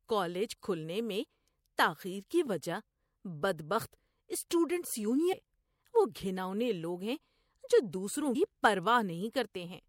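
Compressed frames skipped at 5.32 s and 8.34 s: roughly 300 ms, then about 150 ms, of speech vanish as whole frames, fitting 24 ms frames.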